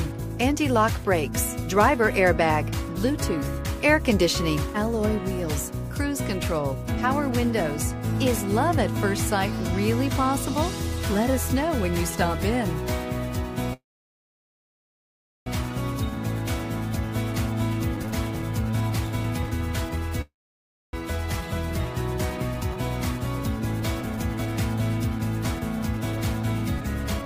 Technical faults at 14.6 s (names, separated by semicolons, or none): call audio freeze